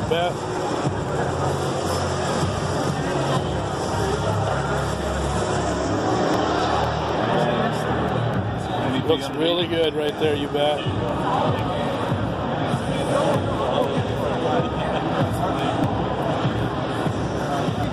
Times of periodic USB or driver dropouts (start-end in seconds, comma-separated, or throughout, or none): 0.09-17.84